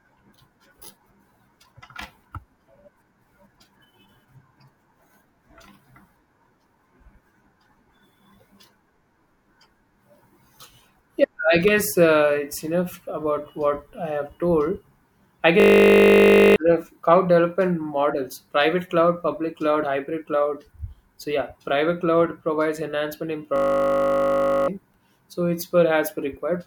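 At 15.6 s, and again from 23.56 s to 24.68 s right after "cloud provides enhancement in", the speech is replaced by a steady, flat buzz pitched at 50 Hz, lasting about a second each time, with roughly a second of speech lost. That buzz is a system hang loop: the computer or driver stalled while the audio hardware kept replaying the same 20 ms stretch of its ring buffer dozens of times over.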